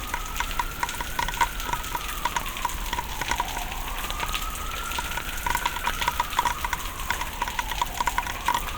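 No technical faults are audible.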